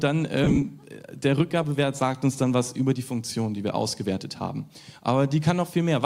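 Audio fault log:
0.44–0.63 s lost LE Audio frames: about 90 ms of Bluetooth LE Audio frames dropped in brief gaps spread over 180 ms, the longest roughly 30 ms. The LC3 decoder patched each gap with the last spectrum under random signs, giving a short noisy smear.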